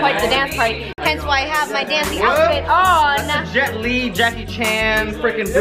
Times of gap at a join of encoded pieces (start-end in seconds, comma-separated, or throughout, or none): 0.93-0.98